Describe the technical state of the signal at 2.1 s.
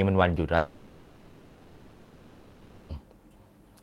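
At 2.1 s the signal sits inside what is likely a long network dropout, running from 0.57 to 2.91 s. The receiver stopped getting audio and padded the roughly 2.3 s gap by extending the last sound, so the speech turns into a fading buzz until the speech returns with that stretch lost.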